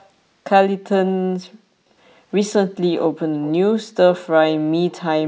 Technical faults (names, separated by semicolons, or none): echo leak